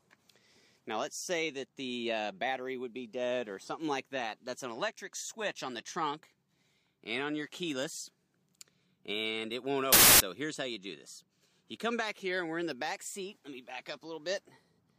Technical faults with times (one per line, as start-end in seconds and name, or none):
9.92-10.20 wrong sample width